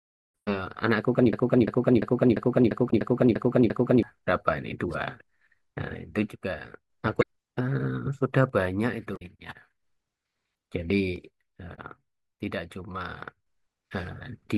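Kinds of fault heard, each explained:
Broken-record loop: From 1.33 to 4.03 s, a 346 ms piece of sound repeats exactly, back to back, eight times, replacing whatever should have played there. The likely cause is a player, encoder or stream stalling and resending the last fragment it held.
Damaged data in a compressed stream: Brief chirps or blips at 2.87–2.93, 7.19–7.23, 9.13–9.22 and 11.73–11.79 s. Corrupted bytes in the compressed stream made the decoder misread or reject frames, lose sync and hunt for the next valid frame header.
One channel drops out: The level abruptly falls by about 6 dB and then recovers, from 6.29 to 6.90 s, 8.49 to 9.83 s and 11.16 to 13.47 s. The likely cause is one stereo channel going missing, which halves shared content once the channels are summed to mono.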